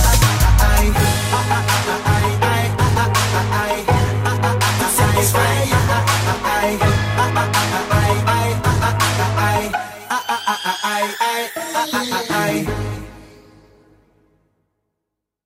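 No technical faults can be heard anywhere in the clip. Nothing breaks up, drops out or distorts at any point.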